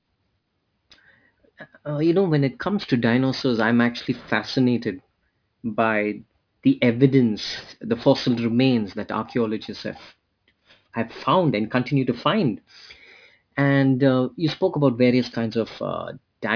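All the way through, this speech has aliasing: energy above 5.5 kHz folds back below it, which fits a drop to 11 kHz sampling with no filter first. Sibilants come out gritty and metallic, the top runs hard to the band edge, and the false tones sit around 20 dB under the speech.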